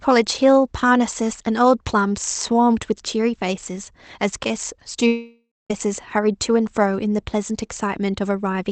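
At 5.07 s the speech breaks off until 5.71 s, likely a long network dropout: the last sound smears into a fading buzz, then about 0.23 s of silence, and the speech resumes with roughly 0.63 s simply gone.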